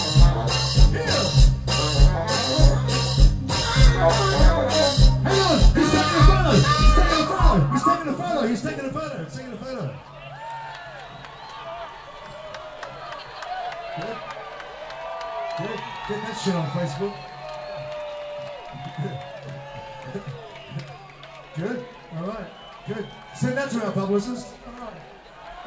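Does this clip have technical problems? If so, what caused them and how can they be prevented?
No, this clip has no technical problems, so there is nothing to prevent.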